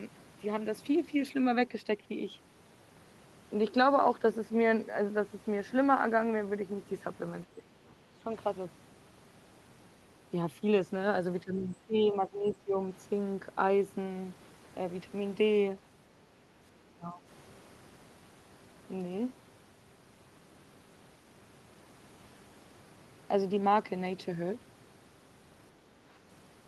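Speech dips sharply in level at 7.55–7.72 s and again at 8.12–8.27 s, the first by around 15 dB and the second by around 10 dB. A longer stretch from 11.44 to 12.84 s loses level in patches totalling about a second, and 16.94–17.22 s drops by around 15 dB. This is likely speech suppressed in double talk, where an echo canceller mistakes overlapping speech for loudspeaker echo and attenuates the talker.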